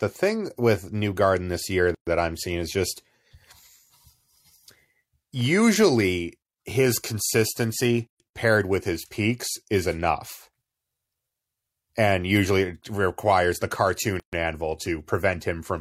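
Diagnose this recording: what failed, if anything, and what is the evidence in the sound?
Separately encoded segments were joined without trimming the encoder's start delay and final-frame padding, leaving a gap at each join of encoded pieces. Every 6 s, at 1.95–2.07 s, 8.07–8.20 s and 14.20–14.33 s, speech drops into 120–130 ms of silence with smeared edges, then resumes where it stopped.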